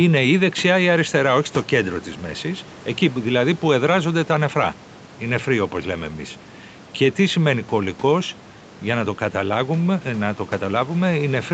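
No technical faults can be heard anywhere in the speech. The call path leaves nothing above about 8 kHz, and a faint room noise sits about 24 dB below the speech.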